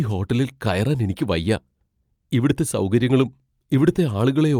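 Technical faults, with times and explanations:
No technical fault can be heard anywhere in the speech. Nothing in it calls for a timed entry.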